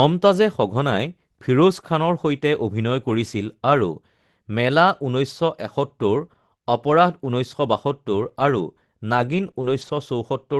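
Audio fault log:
9.07 to 9.97 s: lost packet rebuilt from error correction. Eleven separate 20 ms packets were replaced by the low-bitrate copy carried in the following packet, so there are no gaps, but these frames sound rougher and noisier.
9.51 to 9.55 s and 9.61 to 9.65 s: short concealed packet loss. Each time, 20 ms arrived too late and the decoder extrapolated the preceding sound, heard as a brief smear or wobble before it blends back. This sits among the Opus call's coding noise and its cut-off near 12 kHz.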